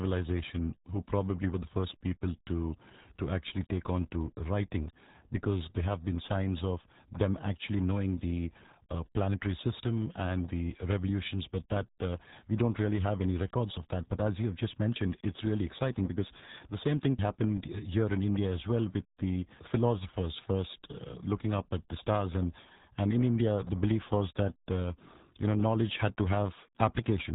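Speech, damaged for its whole length by the RealAudio 14.4 codec. Nothing above 3.8 kHz survives, so the sound is muffled and dull. The codec damage is heavy. Vowels turn gargly. This is a dial-up era speech coder at work. It models the voice crudely and throws away most of the detail. The thin, bubbling result fits a bitrate of around 8 kbit/s.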